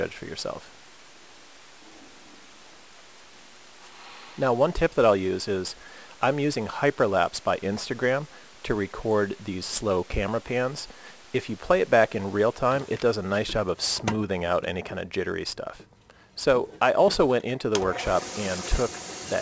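Aliasing runs throughout the clip. The sound was resampled to a lower rate without an anti-alias filter, so content above 8 kHz folds back below that edge and lands at wrong, unrelated frequencies. The fold point fits a drop to roughly 16 kHz. The mirrored energy sits around 20 dB below the main signal, enough to give the high end a gritty, metallic edge. The spectrum runs hard up to 8 kHz instead of rolling off.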